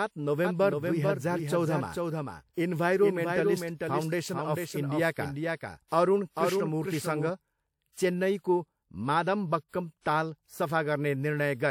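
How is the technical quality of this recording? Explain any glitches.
The speech has two kinds of fault: a passage with a trailing duplicate of itself, and four brief smears before attacks.

From 0.45 to 7.31 s, a copy about 5 dB quieter follows roughly 0.4 s behind and cuts in and out abruptly. This is a doubled audio track, likely from a slower second capture or a misaligned edit.

At 5.11, 5.56, 5.88 and 9.69 s, a 44 to 49 ms hiss precedes sharp attacks and softens them. This is pre-echo: codec quantisation noise spread across a whole block.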